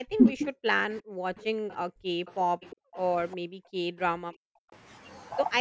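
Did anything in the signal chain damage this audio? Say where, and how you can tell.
Yes, the damage happens at the call-processing stage, in the echo canceller.

Speech suppressed in double talk opens the clip, from 0.00 to 0.43 s. The talker's level drops by roughly 40 dB in patches totalling around 0.4 s. The likely cause is that both sides were talking at once and the canceller, unable to separate near speech from loudspeaker echo, attenuated everything. On a waveform the envelope caves in mid-utterance. On a spectrogram the harmonics and upper band fade or break into fragments.

Background gated by the echo canceller appears from 0.71 to 2.26 s, 2.76 to 2.94 s and 3.37 to 4.71 s. The room tone sinks by as much as about 40 dB and then returns, in stretches totalling about 1 s, 0.2 s and 1 s. The canceller clamps the microphone while the far end plays and releases it afterwards. A spectrogram shows the noise floor turning to near-empty blocks with abrupt edges. 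The waveform's quiet baseline flattens to almost nothing in the same places.

Echo leak is heard from 2.26 to 2.97 s and again from 3.31 to 3.37 s. A faint copy of the sound trails the original by 362 ms at roughly 30 dB below the speech. The likely cause is loudspeaker pickup the canceller failed to remove, which was sent back down the line. On a spectrogram this shows as a weak duplicate of the harmonic pattern shifted right by about 0.36 s. It is easier to see than to find in the waveform. The band above 8 kHz is empty throughout, as expected from call microphone processing.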